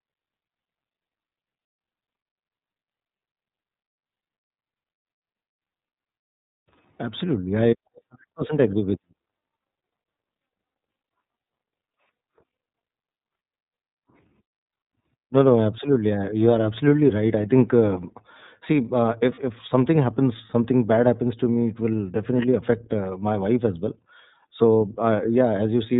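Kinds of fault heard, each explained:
iLBC codec: The speech runs through iLBC, a narrowband VoIP codec, at a rate that points to its 30 ms frame mode, with each frame's excitation coded on its own. The damage is plainly audible as a rough, slightly synthetic edge on the voice. A spectrogram shows everything above 4 kHz missing, a flat empty band across the whole clip, while the waveform keeps its shape but loses fine detail.
Lost iLBC frames: Two single frames drop out, one around 19.34 to 19.39 s and one near 21.54 s, each about 30 ms of signal. The decoder fills each gap by repeating the last pitch cycle mixed with noise, so a brief buzzy, held vowel replaces the real sound. On a spectrogram the gap shows as a short patch of smeared, regular harmonics. The waveform shows repeated cycles before normal speech returns straight away.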